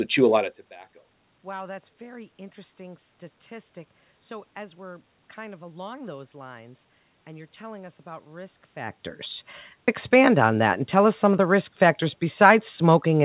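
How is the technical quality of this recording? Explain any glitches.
There are no technical glitches in the speech here. The call path can be heard as narrowband telephone sound, with nothing above 4 kHz, as expected from the G.711 A-law codec at 64 kbps.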